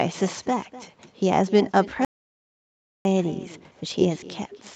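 Speech recorded over a call, band-limited to 8 kHz by the call path, carries two faults. With no echo canceller on the far end, the loudspeaker output returns through the microphone, so every phrase is trailed about a third of a second later by a thin copy about 18 dB down. From 2.05 s to 3.05 s, the input was likely lost, perhaps through a disconnect or mute, and silence was written, leaving about one second of dead silence with no room tone.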